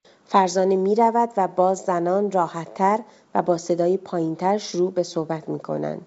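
No faults can be heard: the speech comes through G.722 wideband telephone coding at full wideband bandwidth, with at most a faint hiss in the upper band.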